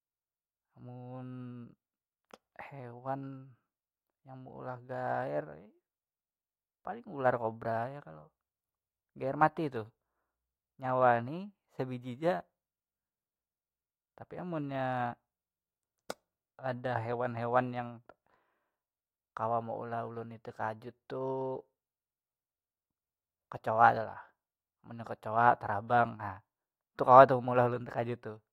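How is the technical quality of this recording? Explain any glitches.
One glitch stands out, between 3.12 and 5.28 s. Resampler restarted on every block: each 40 ms block went from 48 kHz to 44.1 kHz separately, leaving edge errors heard as a 25 Hz ticking buzz under the speech.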